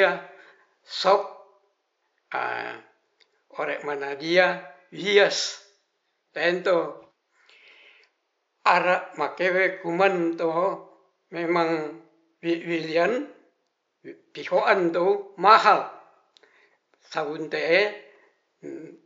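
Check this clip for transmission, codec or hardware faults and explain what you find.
No transmission, codec or hardware faults found; the only background is room noise about 53 dB below the speech, which belongs to the recording itself.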